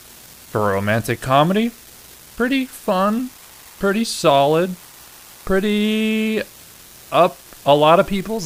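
A steady crackling fizz runs under the whole speech recording, audible even in the pauses between phrases. It is an unreliable data bit: one marginal data line flips at random, and each error lands as an identical spike of about -27 dBFS. From 3.18 s to 5.73 s a faint chirping warble joins it, sitting far below the speech at around 45 dB down. This is timecode bleed, a 23.976 frames-per-second linear timecode leaking from a neighbouring track or cable, its square wave switching between pitches near 1 kHz and 2 kHz.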